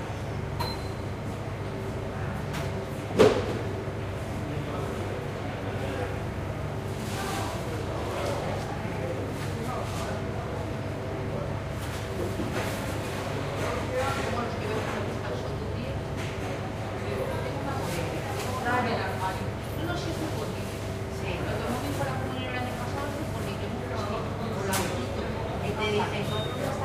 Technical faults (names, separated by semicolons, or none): none